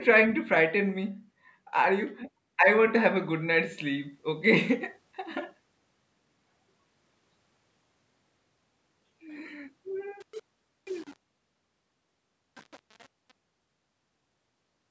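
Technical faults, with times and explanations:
10.20–14.91 s, truncation distortion on a fade: the fade-out, which starts around 10 s and finishes at 14.9 s, turns rough as it gets quieter. The gritty grain, which fits a fade stage keeping only 7 bits with no dither, comes from the quiet waveform collapsing into a few square steps instead of shrinking smoothly toward zero.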